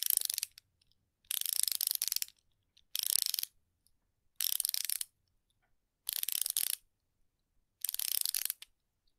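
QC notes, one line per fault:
2.33–2.92 s and 3.55–4.37 s, jitter buffer speed-up: the receiver drained a backlog by snipping out short pitch-period chunks, around 50 ms in each stretch, so the sound runs about 7% then 5% fast at unchanged pitch and feels rushed.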